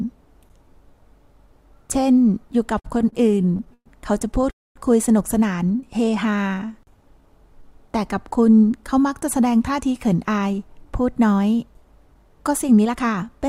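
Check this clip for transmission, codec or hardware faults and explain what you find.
The audio has four network-delivery faults, where the timing of the sound is disturbed rather than its content lost.

From 2.79 to 4.45 s there are repeated stalls (stutter): the sound catches and drags in fourteen short hitches, the longest about 117 ms, with roughly a fifth of that stretch filled in. Packets were arriving late or too slowly, so the jitter buffer kept running dry and the receiver stretched the last sound each time. About 332 ms was padded in this way, and nothing was dropped.

From 4.50 to 4.78 s the sound freezes. A brief continuation of the last sound dies away into about 230 ms of silence before the audio resumes where it stopped, adding roughly 250 ms in all. This is a call audio freeze, likely caused by packets being held up long enough to empty the buffer, with the playout delay then rising by about 250 ms.

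From 5.72 to 7.67 s the audio runs at about 88% speed without any drop in pitch, sounding drawn out. This is a jitter buffer slow-down. The buffer was running low or had just raised its target delay, so the receiver rebuilt its reserve by repeating single pitch periods and slivers of pauses over and over, stretching this passage by 239 ms.

From 9.39 to 13.45 s the opposite happens. The sound plays at about 108% speed and feels hurried, though the pitch stays put. This is a jitter buffer speed-up. The buffer held more audio than it aims for, so the receiver trimmed tiny pieces of one or a few pitch periods in quick succession, removing around a third of a second in total.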